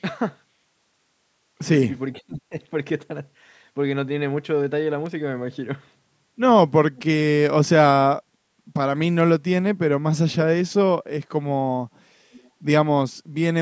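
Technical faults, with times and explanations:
2.13–2.53 s, speech suppressed in double talk: the echo canceller likely mistook both talkers for echo and turned the voice down, so it dips by up to about 25 dB for roughly 300 ms.
5.06 s, dropped samples: a fraction of a millisecond of audio likely went missing, so the waveform jumps abruptly and a single sharp click is heard.
6.96–7.03 s and 12.33–12.50 s, echo leak: the far side's echo canceller likely let loudspeaker sound through, returning brief faint copies of the voice 485 ms late, about 25 and 30 dB down.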